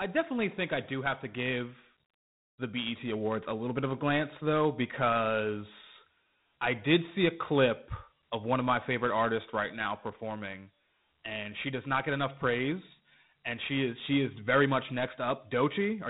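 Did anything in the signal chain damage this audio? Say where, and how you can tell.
Yes, at the codec: Dialogic VOX ADPCM throughout, with nothing above 3.9 kHz and gritty 4-bit step noise riding the speech, which fits 32 kbps.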